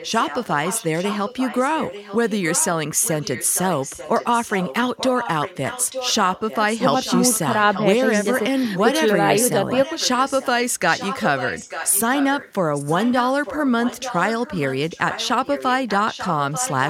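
Echo leak runs through almost the whole clip, from 0.0 to 2.69 s, 3.01 to 8.4 s, 8.75 to 8.98 s and 9.39 to 16.89 s. A delayed copy of the speech trails the original by about 0.89 s, roughly 10 dB quieter, so each phrase is shadowed by a faint repeat. This is likely a far-end loudspeaker whose echo canceller failed to remove what its microphone picked up, sending that sound back down the line.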